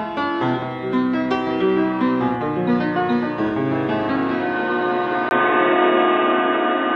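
At 5.29 s the music drops out for about 20 ms, then returns dull and boxy, with nothing above 3.8 kHz, a level shift of about 5 dB and a faint new background noise to the end. This is likely an input switched to a poorer device.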